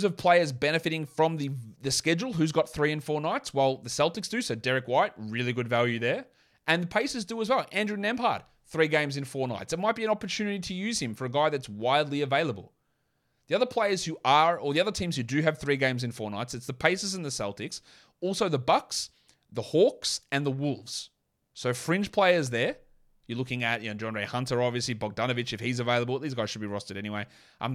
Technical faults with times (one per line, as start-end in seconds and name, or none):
22.47-27.49 periodic USB or driver dropouts